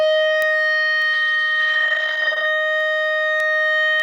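A short music clip with two separate faults. From 0.42 s to the end at about 4.00 s there are word clock ticks, roughly seven sharp, single-sample clicks of uneven strength recurring about every 0.7 s. The receiving device runs on its own clock instead of locking to the digital link, so as the two clocks slip past each other one sample is dropped or repeated. That steady spacing, which points to a clock mismatch of a few tens of parts per million, sets it apart from buffer underruns, which leave irregular gaps rather than isolated ticks. Between 1.15 and 2.51 s there is a call bitrate drop. The encoder was pushed to a much lower rate, consistent with a fall from around 48 kbps to 12 kbps, and stayed near the bottom for about 1.3 s. The music turns rough and muffled throughout that stretch as detail and high frequencies are coded away, then clears when the rate recovers. Unlike packet loss, the sound keeps flowing without gaps or stutters and is simply degraded.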